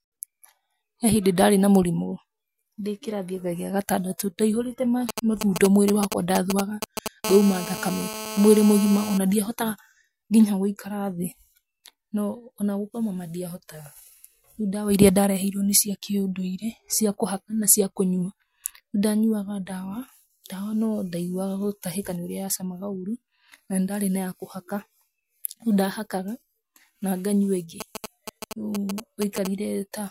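From 5.09 to 7.08 s, GSM signalling bursts from a nearby 2G phone, rectified by the audio circuitry, give a galloping run of ticks and short 217 Hz buzzes roughly as loud as the speech. On a spectrogram they appear as clustered vertical stripes stacked with harmonics.

From 7.24 to 9.18 s, ending just before "na ndiahota", a GSM phone buzz sounds: a call's continuous 217 Hz bursting, rectified into a hard, raspy tone about 9 dB below the speech. The spectrogram shows an unbroken comb of 217 Hz harmonics, and the waveform a regular pulse train.

From 27.81 to 29.47 s, GSM signalling bursts return as the same ticking, galloping clusters, now roughly 10 dB under the speech and showing as fainter grouped stripes.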